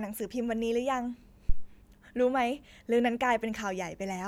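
A speech clip with a phantom power thump from 1.49 to 1.69 s: a deep, low thump peaking at about -12 dBFS and decaying within roughly 45 ms, as a supply step passes through the input's coupling capacitors. Its single smooth decay, without rustle or breath, separates it from handling noise or a plosive.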